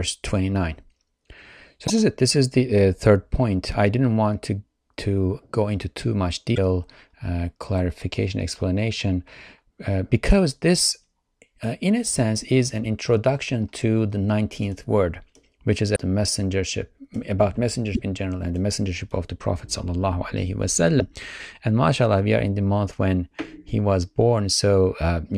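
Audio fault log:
1.84–1.90 s, 6.52–6.58 s, 15.93–15.97 s, 17.92–17.99 s, 20.97–21.02 s: damaged data in a compressed stream. Brief glitches of 48 to 76 ms, the first just before "is it", another after "go into too much". At each, corrupted frames made the decoder misread the bitstream until it resynchronised.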